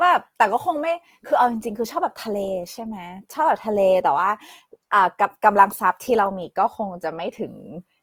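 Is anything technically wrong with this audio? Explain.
Yes. Throughout the speech, the sound is grainy and rough, with a noisy, sandpapery texture on sustained sounds, yet the treble remains present. The likely cause is Opus compression in its CELT mode, which fills bit-starved bands with noise or folded lower content. That fits a bitrate around 24 kbps.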